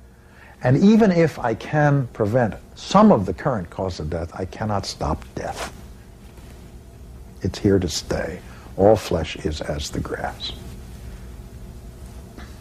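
No technical faults are audible.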